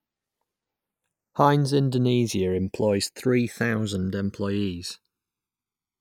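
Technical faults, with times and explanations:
Throughout, channels drifting apart: the two sides of this speech run on clocks that disagree by roughly 150 parts per million, so the gap between them grows steadily to around a millisecond by the end. Summed to mono, the comb-filter notches glide slowly and in one direction through the spectrum, giving a gradual flanging sweep. A fixed inter-channel delay would instead leave notches parked in place, and a flanger effect would sweep back and forth.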